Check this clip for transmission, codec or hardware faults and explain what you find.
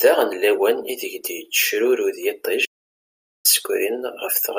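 There is one fault in this speech clip: an audio dropout to silence from 2.66 s to 3.45 s. For about 0.79 s the signal reaching the recorder was lost, likely through a momentary disconnection or an accidental mute upstream, while recording carried on and filled the gap with silence. The speech breaks off abruptly, the background room tone vanishes with it, and the voice resumes mid-flow; whatever was said in that stretch is missing.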